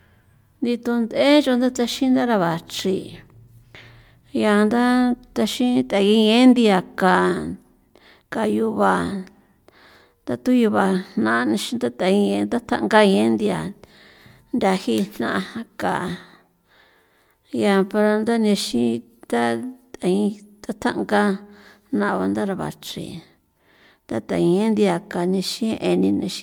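A speech recording carries generation loss from start to finish: a swirly, hollow smearing across the whole clip, with consonant attacks blurred rather than crisp. The cause is likely repeated MP3 encoding, about four passes at a rate that fits 128 kbit/s. Each pass requantised on a shifted frame grid, so the artefacts stacked up. A single encode at that rate would sound far cleaner, and the bandwidth still reaches 20.1 kHz, so the damage comes from accumulated passes rather than low-pass filtering.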